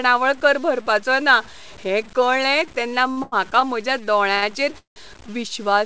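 Across the whole speech clip, the samples were likely cut down to very few bits by plain truncation with no dither, which fits a word length of about 7 bits. Low bit depth without dither leaves a rounding error that tracks the signal itself, so the noise sits only around 25 dB below the speech. Quiet syllables and decaying tails turn grainy and rough, and the softest moments drop to silence or sputter between two steps rather than fading cleanly. The G.722 call path's band limit, with nothing above 8 kHz, is present alongside it.

From 3.08 to 3.63 s, just after "ना हें कळ्ळें तेन्ना", packets kept reaching the receiver late, and its jitter buffer emptied four times in quick succession. Each time, the receiver extended the last sound until data resumed, about 173 ms of filler in all, with the longest wait near 92 ms. Nearly a third of that stretch is synthetic. This repeated stalling, or stutter, makes the speech drag and hiccup, though no speech is lost.

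At 4.35 to 4.44 s, a single late packet caused a short stall: the buffer ran dry, and the receiver held the previous sound for about 70 ms until the packet turned up, then resumed from the same point. The result is one syllable drawn out unnaturally long, with a faint buzzy quality or slight dip in level, and nothing skipped.

From 4.78 to 4.98 s comes a call audio freeze. The audio stops moving forward as the last sound is held into a brief fading buzz, then drops to about 130 ms of silence before speech picks up exactly where it left off. The cause is likely packets held up in transit, draining the jitter buffer for roughly 179 ms, so the freeze inserts a gap without losing any speech.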